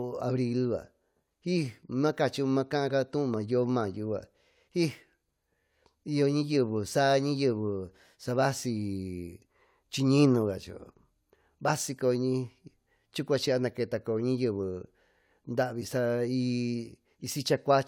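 A recording of speech, with no technical faults to report. Nothing in it calls for a time or a cause.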